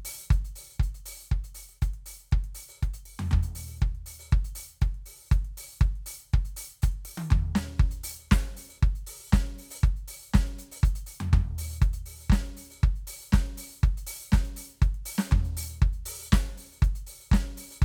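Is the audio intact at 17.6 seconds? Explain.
Yes, the music plays through 17.6 seconds intact, with no audible fault at that moment.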